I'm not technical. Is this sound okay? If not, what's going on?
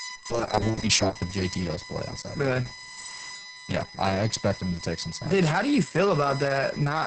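No. Two problems run through the whole clip.

First, a USB whine: a steady, high-pitched tone, based on 1 kHz and loudest around 5 kHz, leaking in from a USB connection's power. Unlike mains hum, it's a thin high whistle, not a low buzz.

Second, heavy Opus voice compression: the speech sounds muffled, hoarse and slightly robotic, with nothing above about 8.6 kHz. A dull microphone would sound muffled but smooth, not gritty and robotic like this.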